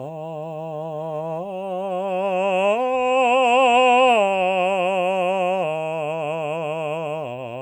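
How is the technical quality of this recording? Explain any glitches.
No glitches or faults audible.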